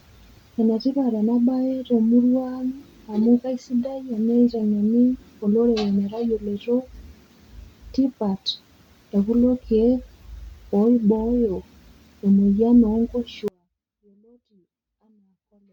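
At 13.48 s the speech abruptly cuts out and never returns: an audio dropout to a faint residue, leaving only a trace of sound roughly 35 dB down. The likely cause is the source signal being lost while the path stayed live. The waveform collapses to a thin sliver, and the spectrogram goes nearly blank.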